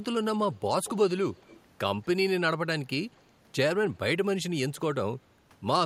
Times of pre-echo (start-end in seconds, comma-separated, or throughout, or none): none